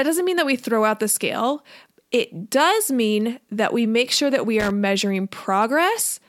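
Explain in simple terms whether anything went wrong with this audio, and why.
Around 4.60 to 4.71 s, just after "make sure that we", there's a short burst of loose connector crackle. A worn or dirty plug contact flickered on and off for about a tenth of a second, chopping the sound into a scratchy crackle.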